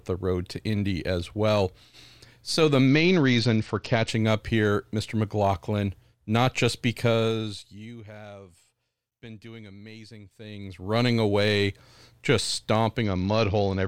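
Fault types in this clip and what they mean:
Bluetooth SBC bit pool drop: Fewer coding bits dull the treble and add grit. This happens at 2.87 to 4.09 s, before "up here", and after "away just" from 13.04 s.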